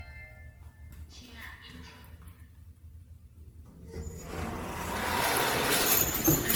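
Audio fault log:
throughout generation loss. The sound is swirly, smeared and hollow throughout. Sharp onsets blur and lose their edge. Content stops near 19.9 kHz. The damage is heavier than a single MP3 pass would leave at this quality. The likely cause is repeated decoding and re-encoding, around fifteen MP3 generations near 94 kbit/s. Each pass requantises on a shifted frame grid, so coding noise and spectral holes build up rather than cancel.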